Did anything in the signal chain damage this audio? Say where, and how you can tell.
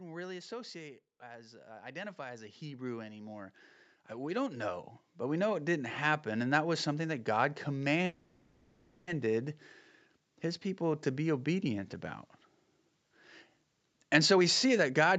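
Yes. The call's automatic gain control is the first stage at fault. From 0.05 to 1.08 s it judged the input too loud and pulled its gain down by about 5 dB. The opening therefore starts hot and then sinks over that second, with the background noise dropping in step with the speech. That shows the level change came from a gain stage, not from the talker backing off.

The same automatic gain control then moved in the other direction, with automatic gain rising from 1.19 to 5.98 s. It climbed by about 18 dB over nearly five seconds. Speech and room noise swell together, slowly and steadily. That slow ramp, affecting everything at once, is the signature of gain being adjusted downstream of the microphone rather than of anything in the acoustic scene.

At 8.05 s the audio freezes. The last sound is stretched into a fading buzz for about 1.02 s, and at 9.09 s the speech resumes exactly where it left off. 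It never goes silent and nothing is skipped, so roughly a second of delay has been inserted. This call audio freeze is likely a network stall, with packets held up until the jitter buffer ran dry and concealment filled the gap.

The jitter buffer later held more audio than it aims for. From 14.17 to 15.17 s it runs a jitter buffer speed-up, trimming short pitch-period slices repeatedly until playback runs at about 117% speed. Roughly 150 ms is removed. Pitch stays put, but the speech sounds rushed and clipped in rhythm. All of this rides on an Opus call path whose bandwidth tops out at 8 kHz.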